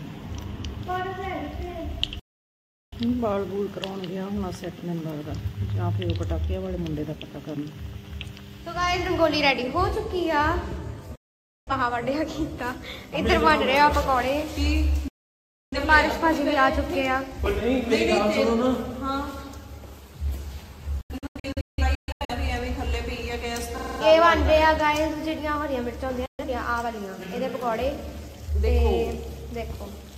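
The audio has five digital broadcast dropouts, at 2.19–2.97 s, 11.15–11.72 s, 15.08–15.78 s, 21.01–22.35 s (scattered short holes) and 26.26–26.45 s, where the receiver muted on lost frames. At 23.78–24.01 s a system hang loop repeats a 46 ms segment at 21.5 Hz, fitting a stalled 2048-sample buffer.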